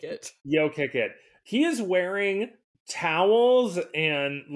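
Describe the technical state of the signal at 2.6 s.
At 2.6 s the speech signal is intact, with no audible fault at that moment.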